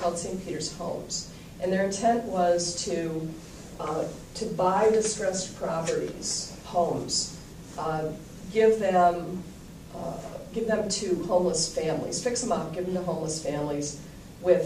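No technical faults are audible anywhere in the audio.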